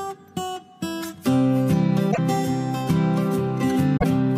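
At 2.08 to 2.19 s, and again at 3.96 to 4.04 s, there is damaged data in the compressed stream. Corrupted bytes make the decoder misread frames and lose sync while it hunts for the next header. Each burst comes out as a brief chirp, squawk, click or short hole.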